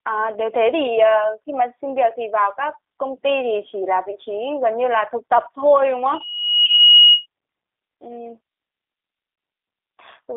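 Throughout the clip the speech passes through the G.729 codec. The band runs from about 250 Hz to 3.7 kHz, and codec damage is plainly audible: a rough, slightly synthetic texture from rebuilding each 10 ms frame out of a vocal tract filter, a pitch predictor and a few pulses. This fits an 8 kbit/s G.729A stream, where everything above the line band is discarded.

At 6.08 s a loudspeaker feedback squeal begins. The microphone is picking up the loudspeaker it drives, and at 2.9 kHz the loop gain exceeds one, so that single frequency grows on itself. It swells over roughly three quarters of a second into a steady tone about 10 dB above the speech. It stops at 7.26 s.

During the squeal, from 6.66 to 6.69 s, there is VoIP packet loss concealed by the speech codec. One 20 ms packet is missing, and the decoder fills the gap by extending its last pitch and filter state at decreasing gain. A second loss of 20 ms follows at 9.36 to 9.38 s. 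Each gap is heard as the last sound stretched out and fading. Because the decoder's state carries forward from frame to frame, the sound stays weak or distorted for tens of milliseconds or more after packets resume.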